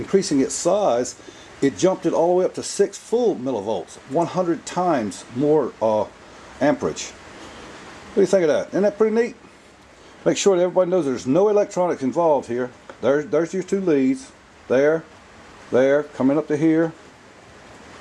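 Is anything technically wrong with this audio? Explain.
No, nothing is technically wrong with this audio.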